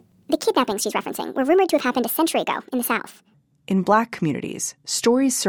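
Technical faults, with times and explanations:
0 to 3.34 s, wrong sample rate. The speech runs 1.5 times too fast and about 7 semitones high. This fits 32 kHz audio played at 48 kHz.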